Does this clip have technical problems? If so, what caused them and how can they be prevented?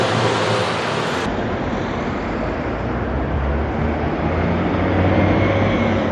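Yes. From 0 to 1.26 s there's a wrong sample rate: the audio runs twice as fast and a full octave (12 semitones) high, which fits 16 kHz material being played out at 32 kHz with no conversion. To prevent it, make sure every file's rate is checked and resampled to the output rate before playback.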